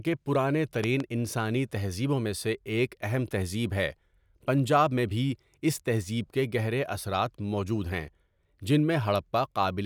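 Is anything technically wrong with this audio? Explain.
Yes. There is a loud pop between 0.84 and 1.02 s, just before "انسانی تہذیبوں میں سے". It comes as two sharp clicks in quick succession. They stand roughly 10 dB above the speech, which carries on underneath. The likely cause is a sudden voltage step entering the signal chain, from a plug, a switch, static or a driver glitch. The circuits after that point shape the jump into a brief pulse.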